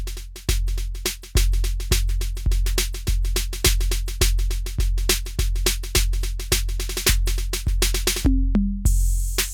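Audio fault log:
0.67 s, pre-echo: a short hiss arrives about 12 ms ahead of a sharp attack in the music, and the attack itself sounds blunted rather than crisp. The transform codec spread its quantisation noise across a whole block, so noise scaled for the loud onset also filled the quiet instant before it. On a spectrogram this shows as a thin broadband smear just before the transient; on the waveform, low-level fuzz precedes the attack's leading edge.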